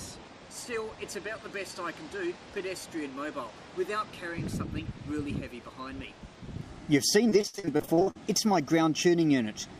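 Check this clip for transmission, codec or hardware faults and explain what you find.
One transmission fault appears near the end. Repeated packet loss (robotic sound) runs from 7.29 to 8.17 s. Short holes, the longest 62 ms, are each filled by stretching the preceding sound, covering over 40 percent of the span. Unlike a single dropout, the rapid chain of patched gaps sounds choppy, with pieces missing.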